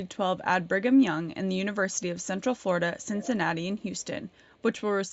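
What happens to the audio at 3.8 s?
Likely an echo leak: an echo canceller on a loudspeaker side failed to remove what its microphone picked up, sending it back. From 3.78 to 4.05 s, a very faint copy of the speech, delayed by about 416 ms, trails far beneath it.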